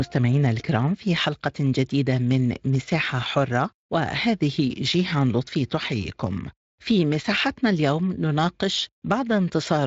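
Nothing in this speech goes wrong at any point; it simply comes through a Speex codec path at 23.8 kbps, with the audio reaching up to about 7.7 kHz.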